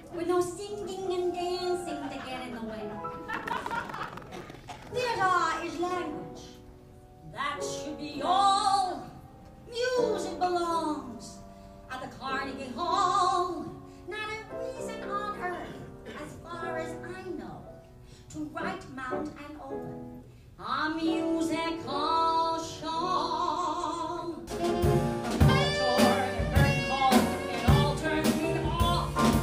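Buffer tearing from 3.30 to 4.89 s: a rattling buzz near 21.5 Hz, which fits a 2048-sample buffer, splices roughly a sixth of each period from audio about 150 ms older.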